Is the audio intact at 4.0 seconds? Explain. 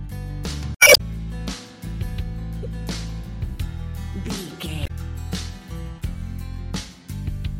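Yes, the audio is intact at 4.0 seconds, with no dropout, click, distortion or other fault to be heard at that point.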